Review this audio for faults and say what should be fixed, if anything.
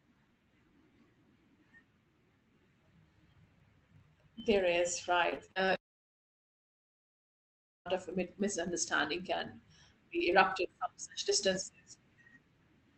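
Filter restarted on every block, throughout the clip: a steady 25 Hz buzz rides under the speech and rises and falls with its level. That rate points to a filter being reset to silence at the start of each 40 ms block, so every block opens with a small transient. Keep the filter's state between blocks instead of clearing it.

Repeated packet loss (robotic sound), from 5.29 to 5.70 s: the speech turns choppy across five short holes, the longest 39 ms, with about 120 ms lost in total. Each hole is patched by stretching the previous sound, so roughly 30% of that span is filled in. A larger jitter buffer or forward error correction would ride out these brief losses.

Long network dropout, from 5.76 to 7.87 s: the concealment buzz fades almost at once, leaving about 2.06 s of silence, and about 2.1 s of the audio never plays before it resumes. This is likely a network outage during which nothing reached the receiver. 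A more stable connection or redundant transmission would prevent the gap.

The call path uses Opus at 20 kbps, which limits the audio to an 8 kHz bandwidth.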